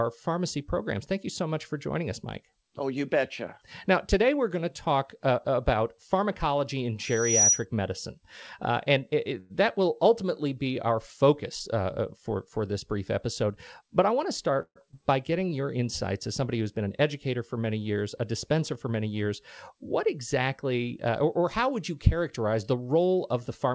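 At 7.03 s, just after "uh about pharmacology in", a thin whistle near 5.8 kHz swells over roughly 0.4 s until it sits about 10 dB above the speech, then stops at 7.65 s. This is loudspeaker feedback squeal: the microphone picked up its own loudspeaker, and at that frequency the loop gain went above one, so the tone kept feeding itself.

At 9.40 s, after "and it", the sound hangs for about a tenth of a second before "that will ultimately be" carries on with nothing lost. This short stall from a late packet happened because the receiver ran out of audio and held the last sound for 97 ms until the packet arrived, adding that much delay.

From 13.43 to 14.57 s the speech runs about 6% fast at unchanged pitch and sounds slightly hurried. This is a jitter buffer speed-up: the receiver held more audio than it needed and trimmed roughly 70 ms by cutting many pitch-period-sized pieces.

At 14.62 s the audio freezes for 135 ms. 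The last sound is drawn out and fades into about 70 ms of silence, then the speech resumes where it stopped. This call audio freeze was likely caused by packets held up on the network, which left the jitter buffer empty.

At 14.91 s the speech jumps forward with almost no gap, and roughly 70 ms of audio is gone. This skip ahead happened because that stretch was dropped while later audio was already waiting, so the two sides were joined almost directly and the delay fell by about 50 ms.

From 15.31 to 15.62 s, just before "insights as somebody who's", the speech slows to about 87% speed at the same pitch and sounds drawn out. This is a jitter buffer slow-down: the receiver repeated pitch periods to add 49 ms and rebuild its reserve.

From 22.66 to 23.73 s there is a second jitter buffer speed-up. The speech runs about 9% fast as roughly 100 ms is trimmed away. Across the whole clip, the G.722 call path leaves nothing above 8 kHz.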